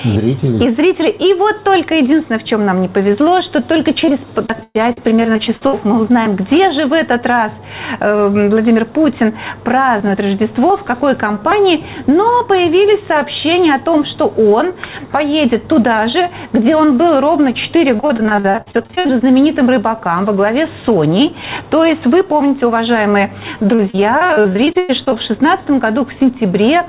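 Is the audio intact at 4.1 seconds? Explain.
No, 4.1 s falls inside a burst of repeated packet loss (robotic sound) from 4.06 to 5.75 s. Eleven gaps, the longest 119 ms, are patched by stretching the preceding sound, so the audio turns choppy, with pieces missing across that stretch.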